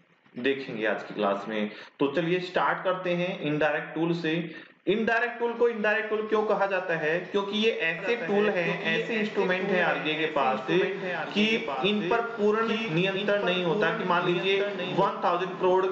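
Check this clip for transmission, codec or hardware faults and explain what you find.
There's one fault: a doubled audio track from 7.99 s to 15.09 s. A second full-band copy trails about a second and a half behind, a few dB quieter, with no room colour, starting and stopping abruptly. It's likely a slower second capture path or misaligned edit.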